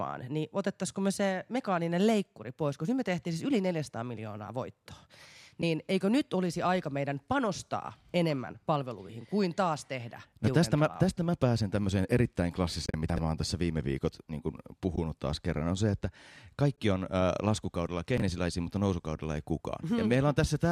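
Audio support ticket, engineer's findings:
Soft-edged dropouts: brief holes at 5.62 s and 16.76 s, a 20 ms gap at 14.96–14.98 s. Probable component: AAC decoder, AAC frame loss with muting. Lost frames zeroed; overlapping windows fade out and back in. The hole lengths fit 10 ms frames.

Patchy, fluttering dropout at 12.86–12.94 s: about 70 ms missing, scattered over 80 ms, the longest run roughly 40 ms. Same mechanism: several lost AAC frames, each muted with a windowed fade rather than a hard cut.

Garbled, jumbled moment at 13.10–13.18 s. Probable component: capture or write buffer, chunks out of order. A segment of about 21 ms plays three segments late; nothing is lost, but the misordering creates three hard joins.

Shorter jumble at 18.18–18.22 s. Same fault: one segment of about 21 ms plays one position late, swapping adjacent audio and leaving hard discontinuities at the joins. Points to the same buffering stage as the 13.10 s event.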